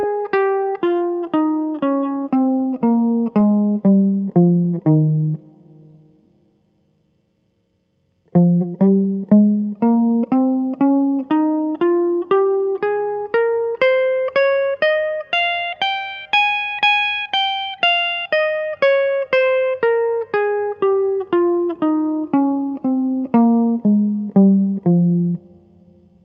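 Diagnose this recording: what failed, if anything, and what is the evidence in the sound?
Nothing failed in this music.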